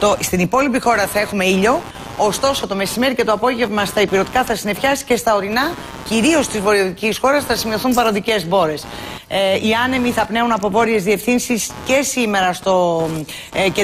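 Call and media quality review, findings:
Computer activity noise, whole clip: buzzy chirping pulsing about 100 times a second, around 20 dB under the sound, rising and falling with machine load, not content. Likely shared ground: CPU, GPU or mouse current swings bleeding into the audio path.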